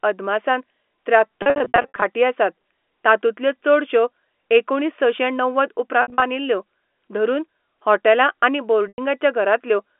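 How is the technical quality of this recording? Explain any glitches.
The recording has dropouts at three points, heard as brief buzzy, held stretches or a short silence in the speech from packet loss with pitch repetition. The telephone-band G.711 sound, limited to roughly 250 Hz to 3.4 kHz, is not itself a fault. From 1.42 to 2.02 s and 6.02 to 6.22 s, the speech briefly freezes into a buzzy, sustained tone, and from 8.88 to 8.98 s it fades into a short silence before returning. The receiver lost packets and replayed the last pitch period to fill each gap. The first stretch loses about 340 ms in gaps of up to 60 ms, the second about 140 ms, and the third 100 ms, which fits 20 ms packets.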